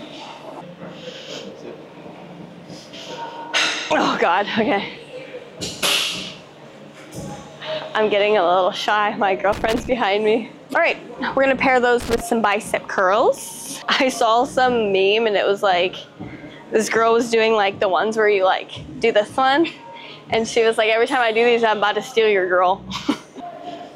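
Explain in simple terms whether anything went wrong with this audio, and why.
Something did go wrong, twice. There is loose connector crackle from 9.53 to 9.92 seconds, and again from 12.00 to 12.21 seconds. Each burst is short, about 0.4 and 0.2 seconds. You hear a rough, irregular scratching over the sound. This happens when a worn or dirty plug contact shifts. The signal keeps cutting in and out very fast, which chops the audio.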